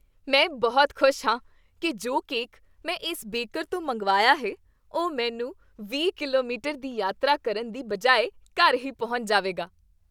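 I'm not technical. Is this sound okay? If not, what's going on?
Yes, no faults heard.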